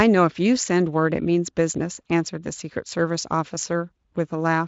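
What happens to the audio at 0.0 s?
Nothing goes wrong at 0.0 s: the speech is intact at that moment, with no dropout, click or distortion, and the Speex coding leaves at most a faint trace at this high setting.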